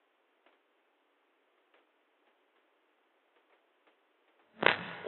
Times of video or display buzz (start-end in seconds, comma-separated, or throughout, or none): none